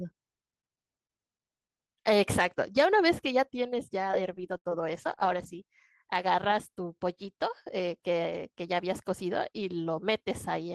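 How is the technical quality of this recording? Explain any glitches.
The recording has one glitch: repeated packet loss (robotic sound) from 4.07 to 5.58 s. Six gaps, the longest 74 ms, were each filled by stretching the preceding sound, so the speech turns choppy with pieces missing. A spectrogram shows frozen, smeared harmonic bands broken by abrupt edges. The waveform shows repeated near-identical cycles and sudden jumps in level.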